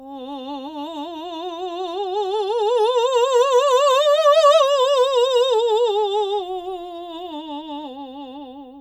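No technical faults are audible.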